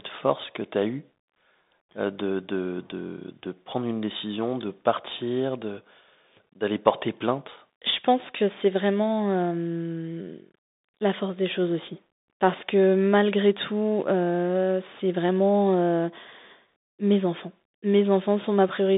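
The speech runs through a Bluetooth CVSD headset codec throughout. Nothing above 3.8 kHz survives. The one-bit delta coding adds scratchy sibilants and granular hiss.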